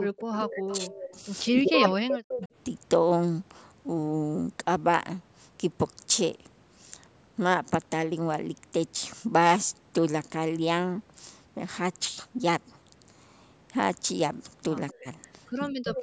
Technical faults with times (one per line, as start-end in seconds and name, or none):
0.06-0.90 speech suppressed in double talk
0.33-1.19 echo leak
1.21-2.49 speech suppressed in double talk
1.89-2.48 echo leak
14.92-15.07 speech suppressed in double talk
15.70-15.97 speech suppressed in double talk
15.95-16.03 echo leak